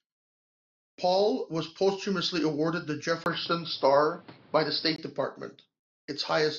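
Right after "was posthumously awarded the", at 3.24 s, a brief 20 ms gap opens and the speech turns dull, with nothing above 5.6 kHz, until 4.98 s. The level also shifts by about 5 dB and faint new background noise appears, which points to the input having likely switched to a poorer device rather than to simple filtering.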